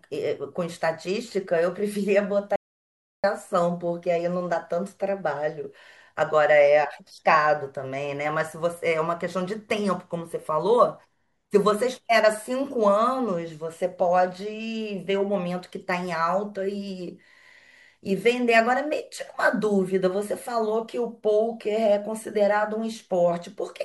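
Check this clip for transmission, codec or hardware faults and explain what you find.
One fault is present. From 2.56 to 3.24 s there is an audio dropout to silence. The speech stops dead, leaving silence without room tone. About 0.68 s is lost, likely from the input briefly failing while recording continued.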